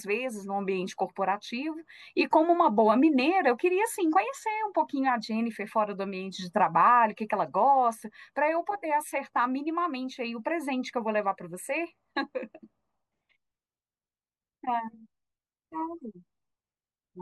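Nothing stood out as a technical fault on listening to this speech recording.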